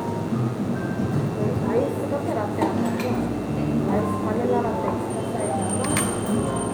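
From the first moment to the last, a DECT cordless phone buzz sits about 20 dB beneath the sound. A nearby handset or base transmits a brief radio burst 100 times a second, and the audio circuitry rectifies it into a thin, rasping 100 Hz buzz dense with harmonics. Mains hum at 50 or 60 Hz is smoother, with fewer, weaker harmonics, while this buzz has a sharp, pulsed edge.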